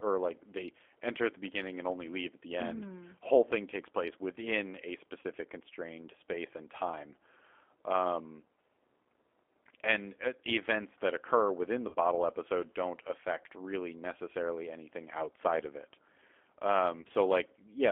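Throughout, the speech has passed through the G.729 codec at 8 kbit/s, which models each 10 ms frame as a vocal tract filter, a pitch predictor and a few sparse pulses rather than keeping the waveform. The line is confined to about 300 Hz to 3.5 kHz, so the sound is thin and muffled, and the codec damage is plainly audible as a rough, slightly synthetic quality on every stretch of speech.

Packets then go missing four times, and each time the decoder fills the gap with VoIP packet loss concealment, extending the last pitch and filter while turning the gain down. At 1.53–1.56 s, between "they enter at the" and "and only leave at", about 10 ms is missing, which fits a single lost frame, and it comes through as a brief stretched, fading sound. At 5.20–5.26 s, after "takes place within a" and before "constrained space and time", 40 ms is lost and becomes a short stretched sound that fades, and the following syllable comes back weak as the decoder recovers. 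The same happens at 11.89–11.96 s, between "that occur within the" and "episode don't affect really". Near 17.01–17.10 s, 40 ms of loss is scattered over about 80 ms, with no gap longer than 20 ms, giving a stuttering patch rather than one dropout.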